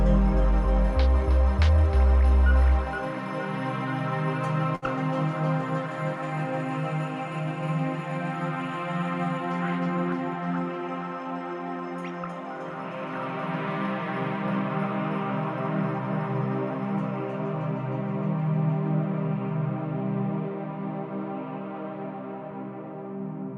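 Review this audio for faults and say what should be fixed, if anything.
A short stall from a late packet occurs at 4.75 to 4.85 s. A packet arrived late and the jitter buffer ran dry. The receiver held the last sound for about 68 ms, leaving a brief smeared hold, then resumed with nothing lost. A deeper jitter buffer or adaptive buffering would absorb such late arrivals.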